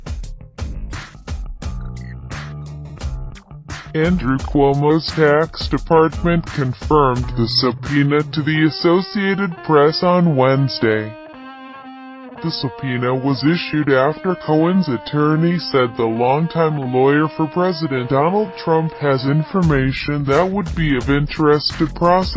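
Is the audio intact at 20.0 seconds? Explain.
No, at 20.0 s the sound is slowed to two-thirds speed and about 7 semitones low throughout: a wrong sample rate, consistent with 24 kHz material played back at 16 kHz.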